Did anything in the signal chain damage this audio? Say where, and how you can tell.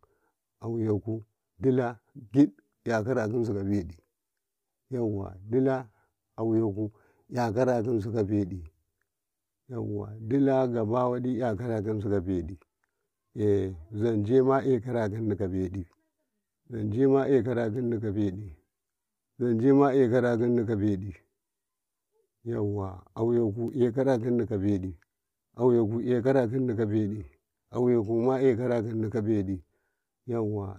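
No, no signal-chain damage heard.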